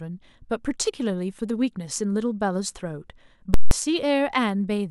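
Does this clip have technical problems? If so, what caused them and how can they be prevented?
Yes: invalid numbers at full scale from 3.54 to 3.71 s, a loud pop at each edge with silence between, consistent with an 8192-sample block pinned to maximum. Prevent it by checking for infinite or invalid values and clamping them before output.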